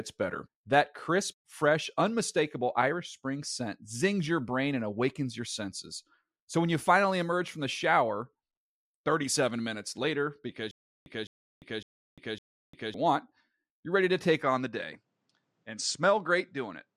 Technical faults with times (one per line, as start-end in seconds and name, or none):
10.71-12.94 stutter with silent gaps
14.42-16.96 input switched to a poorer device